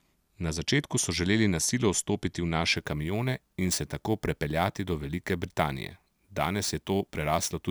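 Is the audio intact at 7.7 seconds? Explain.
No. Crude rate conversion runs from 2.76 s to the end at 7.70 s. Samples were simply repeated to the nearest position, which fits a jump from 32 kHz to 44.1 kHz, leaving an error roughly 20 dB below the speech that is heard as gritty, inharmonic fizz.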